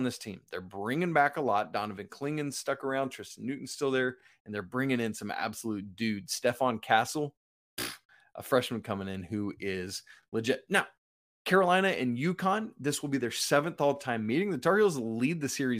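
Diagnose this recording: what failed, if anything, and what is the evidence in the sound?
Overlapping chunks at the buffer stage: about 23 ms replays at 4.20–4.23 s after "still there" and 10.23–10.25 s after "coming in who is", marking overlapping 6-second chunk joins.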